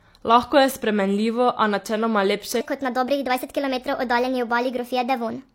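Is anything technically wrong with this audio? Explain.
Yes. From 2.61 s to the end, a section at the wrong speed plays the speech 1.3 times fast. Pitch rises about five semitones. A likely cause is a wrong playback clock.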